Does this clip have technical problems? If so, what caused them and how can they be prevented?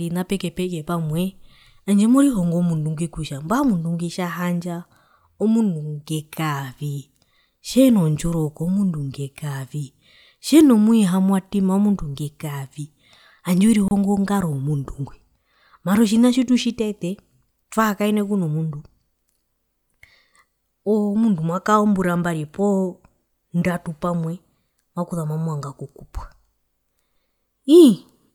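Yes. A gap at a join of encoded pieces runs from 13.88 to 13.91 s: the speech drops out for about 30 ms, then resumes exactly where it stopped. The segments were encoded separately and joined untrimmed, so each run's start-up delay and last-frame padding survive as silence. A spectrogram shows a thin, blank vertical stripe with slightly smeared edges, and the waveform falls nearly flat. Trimming encoder delay and padding before joining, or encoding in one pass, prevents it.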